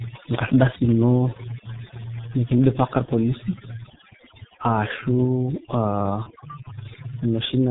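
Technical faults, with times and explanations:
Throughout: overdone noise removal. The background has been pushed down, leaving twinkling specks where individual frequency bands flicker on and off. Quieter parts of the speech fall under the noise estimate and are cut away with them.
Throughout: G.723.1 codec. The heavy coding damage points to this early telephony codec at its 6.3 kbit/s mode. Nothing above 4 kHz gets through, and the slowly updated voice model blurs consonants, so the speech sounds muffled and hoarse.
0.71 to 0.76 s: microphone overload. Peaks exceed the converter's ceiling by about 6 dB, and their tops are flattened across roughly one sample in seven. That gives the loud syllable a harsh, crackling edge, most likely from input gain set too high.
0.76 s: microphone volume stepped down. Right after the distorted peak, voice and background both drop by about 3 dB in a single step. 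This is most likely the call software reacting to the clipping by lowering the device's input volume.
3.05 to 3.11 s and 6.23 to 6.32 s: VoIP packet loss concealed by the speech codec. Each gap fits one lost 30 ms frame. The decoder fills it by extending its last pitch and filter into a fading sound, and the speech stays weakened briefly after packets resume.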